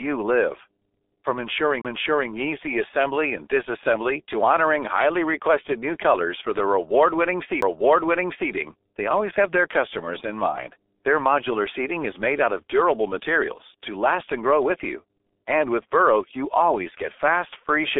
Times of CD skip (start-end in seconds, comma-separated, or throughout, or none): 1.81-1.85, 7.61